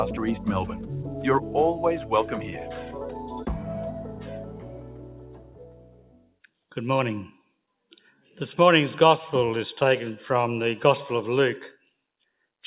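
A noise suppressor meant for speech stays on throughout. It mistakes steady tones and tails for noise, so the level pumps and thins with swings of around 10 dB.

The same noise suppressor cuts the sound hardest from 0.77 to 1.54 s (about 6 dB down), 2.42 to 2.57 s (about 5 dB), 3.13 to 3.68 s (about 5 dB) and 3.91 to 6.46 s (about 6 dB). In these stretches held sound sinks and decays stop short.

All of it arrives through a narrowband call path with nothing above 4 kHz, which fits G.711 mu-law coding.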